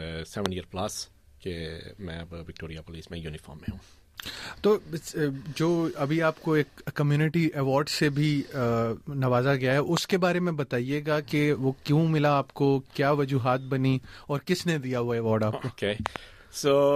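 A sharp, loud pop cuts in at 0.46 to 0.48 s, peaking about 20 dB above the surrounding audio. A pair of pops in quick succession follows at 9.97 to 10.13 s, about 15 dB up, and another double pop lands at 16.06 to 16.18 s, again about 20 dB up. The sound continues underneath each one. These are loud pops, likely from a sudden voltage step or spike, such as a plug, switch, static discharge or driver glitch, briefly shaped by the following circuitry.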